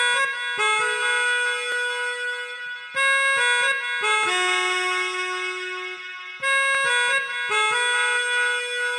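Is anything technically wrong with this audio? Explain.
Yes. Two faults are audible.

Sample clock jitter runs through the whole clip. The converter's clock wanders by a fraction of a microsecond, so each sample is taken a little early or late. The error is worst where the waveform changes fastest. It sits roughly 45 dB below the signal. You hear it as a faint hiss or grain that rises on loud, bright moments and disappears when the sound goes quiet.

Overlapping chunks cause brief glitches at 1.72, 4.23 and 6.75 s. The audio was handled in 2.5-second blocks, and each new block began slightly before the previous one finished. About 13 ms of sound therefore plays twice at every join. Because the blocks are a fixed length, the defects recur at a steady interval. Each one is heard as a quick click or tiny stutter.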